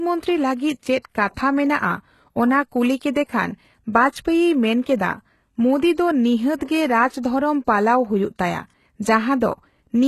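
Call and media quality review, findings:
HE-AAC compression, whole clip: sibilants gritty and lispy, treble extended but synthetic, nothing above 12.3 kHz. Likely HE-AAC at a low rate, fitting roughly 16 kbps. Band replication copies lower bands upward, so harmonics mismatch across the crossover.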